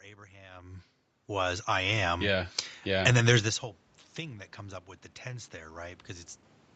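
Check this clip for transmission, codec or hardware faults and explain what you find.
One kind of fault appears twice, automatic gain rising. From 1.26 to 3.55 s, ending just before "whole thing that comes", the AGC lifts gain about 8 dB. From 5.23 to 6.1 s, after "comes up with the", the input falls about 19 dB and the AGC raises gain about 4 dB. Each time, voice and background swell slowly together.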